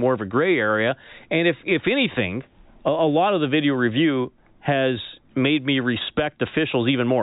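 At 6.47 s, bit errors on a digital phone line corrupt a handful of samples in the G.711 A-law stream, at a rate of roughly one bit in a thousand. Each flipped bit changes a single logarithmic sample. When it hits a high-order bit or the sign of a loud sample, that sample jumps far from its true value, and the result is a brief, sharp tick or crackle sitting on top of the speech, whose band stays limited to below 4 kHz.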